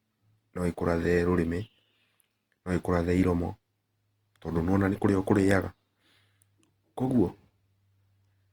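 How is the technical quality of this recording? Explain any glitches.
The speech has plainly audible codec damage throughout. Tonal parts come out grainy, rough and noisy rather than clean, though the spectrum stays full-width up to about 20.2 kHz. This points to Opus compression, likely in its CELT mode at a low bitrate around 24 kbps. With too few bits, the encoder fills starved bands with folded copies of lower spectrum or with noise, so fine detail becomes grit rather than swirling holes.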